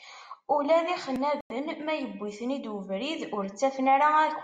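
At 1.41 s the speech cuts to silence for about 95 ms, resuming by 1.52 s. This is a Bluetooth stall. Radio interference likely delayed packets, so the headphone buffer emptied. Playback halted until resent audio arrived, leaving a clean gap.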